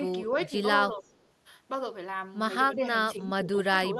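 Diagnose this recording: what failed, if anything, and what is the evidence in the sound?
Call processing is where it broke. The speech keeps ducking by roughly 5 to 15 dB at 0.2–0.28, 0.48–0.53, 0.89–1.15, 2.75–2.9, 3.12–3.47 and 3.71 s to the end. It's speech suppressed in double talk, likely the echo canceller mistaking the talker for loudspeaker echo and turning both down.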